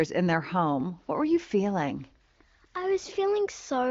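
No faults are audible.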